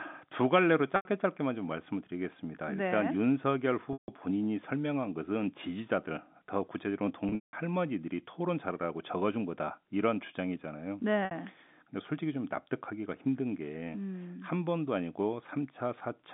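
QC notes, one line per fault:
0.96–1.05 s, 3.93–4.08 s, 7.29–7.53 s, 11.25–11.31 s: packet loss with pitch repetition. Four dropouts of 90, 150, 210 and 60 ms, which fits 30 ms packets. The receiver patches each gap by looping the last pitch cycle and fading it, so the short ones sound like a brief buzzy hold. The 7.29 s hit is scattered over 240 ms with an 180 ms run, long enough that the loop fades toward silence before the audio cross-fades back, all over the narrowband telephone line.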